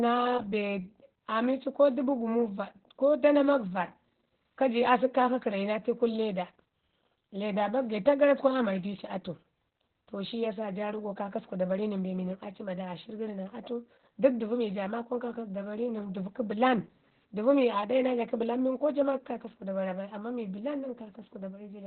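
From start to finish the speech carries heavy Opus voice compression: the SILK coder has dropped to narrowband, so nothing survives above about 4.4 kHz, and the coarse excitation leaves it muffled, hoarse and a bit robotic, which fits a bitrate around 8 kbps.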